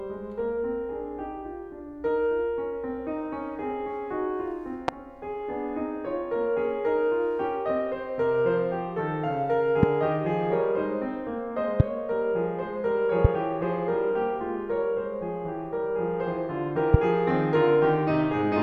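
A sudden voltage step, likely from a plug, switch or static discharge, gets added to the signal five times, at 4.88, 9.83, 11.80, 13.25 and 16.94 s. Each produces a single loud pop lasting roughly 26 ms and standing about 20 dB above the music, with the last one somewhat louder still. The downstream circuitry rounds each pulse into a sharp thump while the music carries on underneath.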